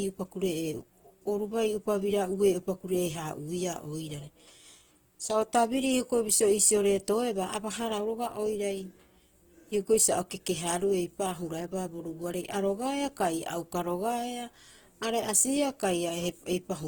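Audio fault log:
Throughout, Opus compression: likely a starved Opus CELT encoder, fitting about 16 kbps, fills bands with folded spectrum or noise, so the speech sounds grainy and rough.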